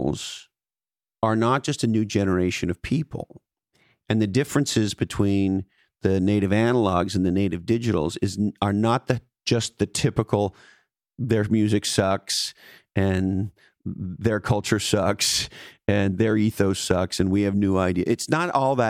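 No technical faults can be heard anywhere in the speech recording. There is nothing at any point in the audio that calls for a time stamp or a closer listen.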